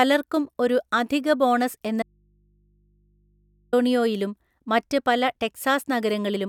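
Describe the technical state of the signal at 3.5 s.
At 3.5 s the signal is inside an audio dropout to a faint residue, running from 2.03 s to 3.73 s, just after "ഒരു അധിക ബോണസ് എന്ന". The speech cuts off abruptly and about 1.7 s is lost. What fills the gap is mains hum, roughly 40 dB below the speech, likely from an input left open while the path stayed live. That steady hum, and the sudden cut rather than a fade or a natural pause, set it apart from a dropout to true silence.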